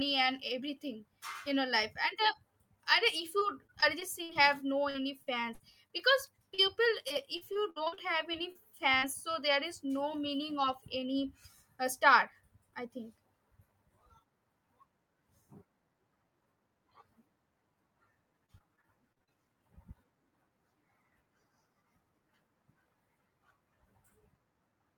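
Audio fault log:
3.39–4.37 s, 4.90–6.60 s, 7.08–8.57 s, 18.46–19.31 s: repeated packet loss (robotic sound). Closely spaced gaps up to 60 ms are each patched by extending the previous sound, leaving choppy, robotic speech with pieces missing.
8.99–9.04 s: short concealed packet loss. About 40 ms of audio arrived too late; the receiver continued the preceding sound and blended back, giving a brief smear.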